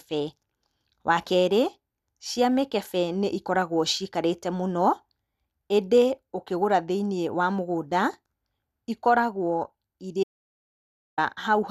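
At 10.23 s the speech cuts off abruptly into dead, toneless silence, with no room noise at all, until 11.18 s, so roughly 0.94 s of material is missing. This audio dropout to silence likely comes from the input briefly disconnecting while recording continued writing zeros.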